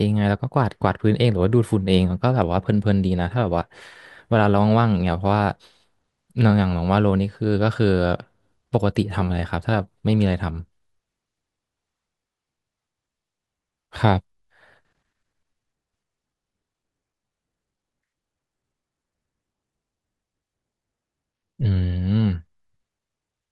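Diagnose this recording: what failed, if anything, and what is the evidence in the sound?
Nothing failed here as far as I can hear: the speech comes through steady and intact, and there's no event anywhere in the recording that points to trouble at any stage of the chain.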